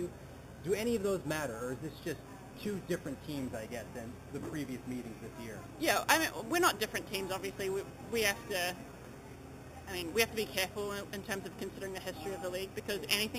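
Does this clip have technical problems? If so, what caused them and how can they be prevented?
Yes. Imaging from sample-and-hold upsampling runs through the whole clip. The sound was converted from an 8 kHz rate to 44.1 kHz by simply repeating samples with no smoothing filter, leaving mirrored spectral copies around multiples of 8 kHz. The lowest copy fills 4 to 8 kHz at about 11 dB below the signal, heard as a bright metallic fizz that follows the sound's level and moves against its pitch. Prevent it by upsampling with a proper interpolating low-pass filter that removes everything above 4 kHz.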